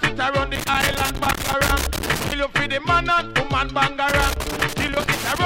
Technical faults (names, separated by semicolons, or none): loose connector crackle